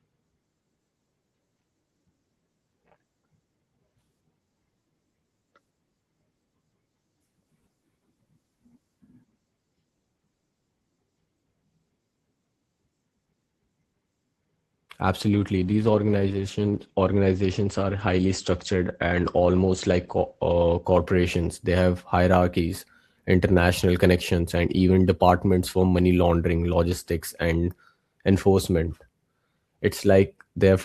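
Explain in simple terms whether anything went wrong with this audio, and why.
From 15.21 s to 21.86 s the speech sounds rougher and duller. This is a call bitrate drop: the call's connection estimate fell, so the Opus encoder coded the sound more coarsely and cut the treble down to 8 kHz until it recovered before "hierarchies international connections and".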